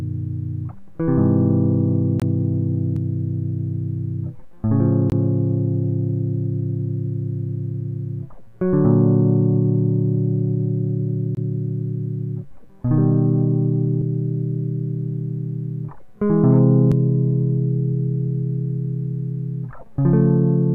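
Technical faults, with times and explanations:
2.20–2.22 s, 5.10–5.12 s and 11.35–11.37 s: block of digital silence. Each 21 ms dropout, fitting a 1024-sample buffer left unfilled, cuts out and back abruptly.
2.96 s, 14.02 s and 16.92 s: damaged data in a compressed stream. Corrupt frames make the decoder lose sync and search for the next frame header.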